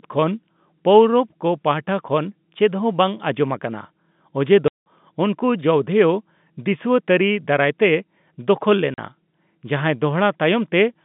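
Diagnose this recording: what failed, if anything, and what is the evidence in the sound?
The failure is in the network stage: packet loss filled with silence. The audio drops to dead silence from 4.68 to 4.85 s, with 180 ms lost, and again from 8.94 to 8.98 s, a 40 ms hole. Both gaps have hard edges. Their lengths are whole multiples of 20 ms, which fits 20 ms packets on the G.711 telephone line. A buffer underrun or converter glitch would not keep to that packet grid, and a receiver with concealment would fill the holes with stretched or repeated sound instead of silence.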